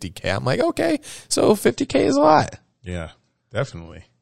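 At 1.67 s, just after "I'm like okay so", the adaptive stream switches to a lower bitrate because the connection slowed. There is no gap, but treble above 8.3 kHz vanishes and codec artefacts thicken through to the end, which fits a drop from about 128 to 32 kbit/s MP3.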